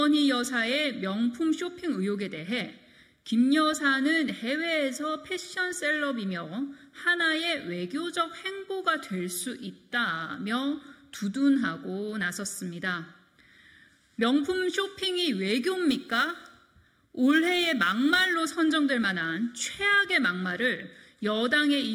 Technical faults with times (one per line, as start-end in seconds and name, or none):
15.89-18.34 crude rate conversion